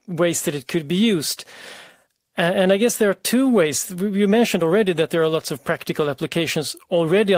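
No technical faults can be heard anywhere in the recording.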